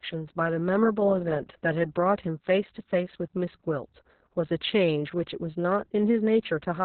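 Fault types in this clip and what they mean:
Opus voice compression: the speech was squeezed through Opus at a very low bitrate, which points to roughly 6 kbps, running its SILK linear-prediction coder in narrowband mode with long 60 ms frames. With so few bits, the codec drops the upper band entirely, leaving nothing above about 4.3 kHz, and codes the excitation coarsely. The result, present for the whole clip, is heavily damaged speech that sounds muffled and telephone-like, hoarse in texture and slightly robotic.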